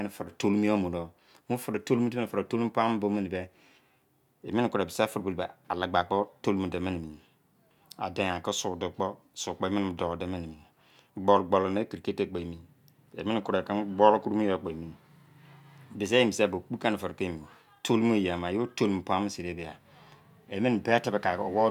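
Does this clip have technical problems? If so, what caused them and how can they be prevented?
No, no technical faults are audible.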